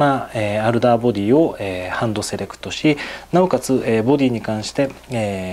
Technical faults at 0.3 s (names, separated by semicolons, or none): none